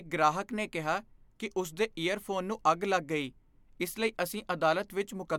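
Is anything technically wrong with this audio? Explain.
No, nothing technically wrong stood out on listening to this recording.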